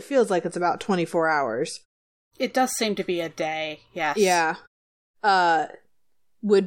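A speech recording with no technical faults to report. In the pauses the output fades to silence and the background drops away, then returns in time for the next phrase.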